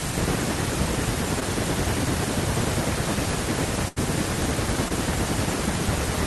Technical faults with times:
1.40-1.43 short concealed packet loss
3.88-3.98 burst of packet loss
4.88-4.92 short concealed packet loss

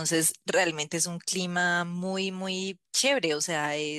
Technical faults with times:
none

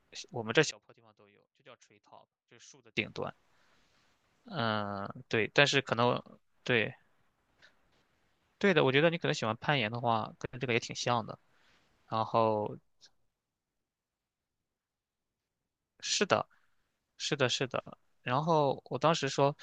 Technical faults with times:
0.71-2.97 one channel inverted

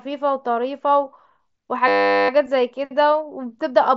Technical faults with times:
1.88-2.29 system hang loop

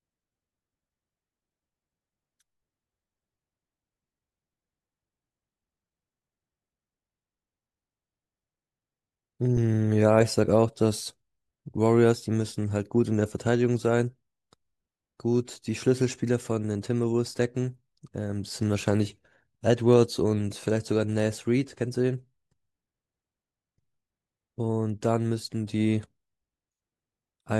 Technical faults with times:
none

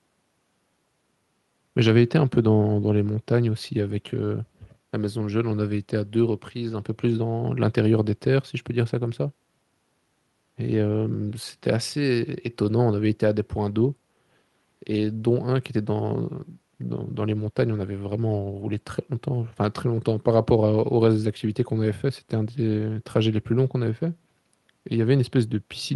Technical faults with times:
none

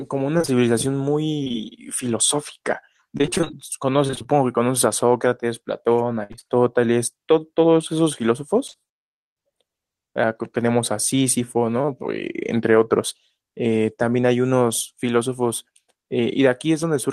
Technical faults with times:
0.37-1.55 repeated packet loss (robotic sound)
3.17-4.28 repeated packet loss (robotic sound)
6.23-6.51 repeated packet loss (robotic sound)
8.71-8.75 short concealed packet loss
11.81-11.90 short concealed packet loss

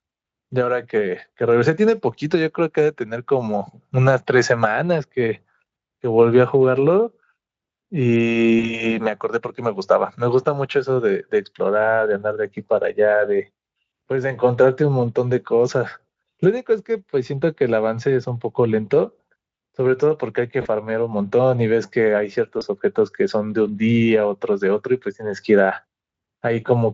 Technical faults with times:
8.59-8.72 VoIP packet loss concealed by the speech codec
20.61-20.68 VoIP packet loss concealed by the speech codec
22.59-22.63 VoIP packet loss concealed by the speech codec

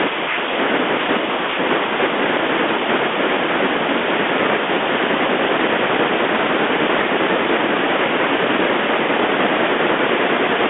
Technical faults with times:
6.95-7.03 bit errors on an ADPCM link

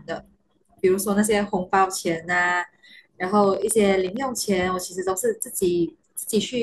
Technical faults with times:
3.24-4.24 train of clicks

